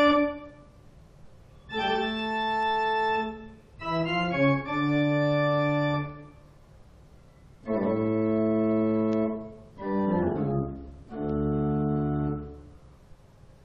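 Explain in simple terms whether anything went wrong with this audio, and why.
Sharp ticks repeat about every 0.4 seconds from 0.46 to 13.46 s. These are word clock ticks: two unsynced digital clocks drift, so a sample slips.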